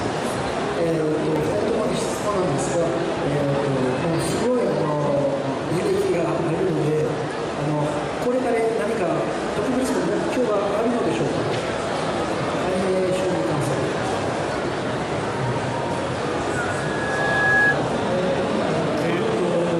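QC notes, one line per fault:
1.36 s, dropped samples: a single sharp click where the waveform jumps straight from one value to a later one, likely because a fraction of a millisecond of samples went missing. Nothing audible is lost, unlike a dropout, which leaves a gap of silence.
16.6 to 17.77 s, loudspeaker feedback squeal: one steady tone near 1.7 kHz swells over roughly a second until it sits a few dB above the sound, because the microphone is re-amplifying its own loudspeaker. The gradual self-building rise separates it from a constant interference whine.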